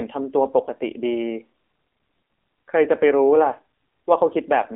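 A speech clip carrying AMR narrowband mobile codec damage from start to finish. Nothing is heard above about 3.8 kHz, and the usable band sits roughly between 250 Hz and 3.6 kHz, the classic telephone line. The coding damage is plainly audible. That level fits a low AMR-NB mode near 7.4 kbps. At that rate the codec rebuilds the voice from a simple vocal-tract model fed by a few pulses per 5 ms subframe. Fine detail is lost, and the sound turns synthetic.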